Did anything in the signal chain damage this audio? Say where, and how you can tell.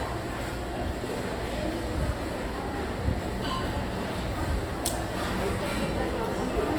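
Yes. At the codec stage, the whole clip has the texture of Opus compression, likely in its music (CELT) mode. The sounds turn grainy and rough rather than swirly, and content still reaches about 20.2 kHz with no sign of narrowing. An MP3 would instead leave spectral holes that warble. Opus keeps every band's energy and fills starved bands with noise or folded copies of lower ones. That fits a low bitrate of around 24 kbps.

Between 3.41 and 3.56 s, two sharp pops land in quick succession. They stand roughly 5 dB above the surrounding sound, which carries on underneath without a gap. This is a loud pop, most likely from an electrical step or pulse in the analogue wiring or a driver glitch. A buffer dropout would interrupt the audio, and a click from a sample-format fault would be a single spike rather than two shaped thumps.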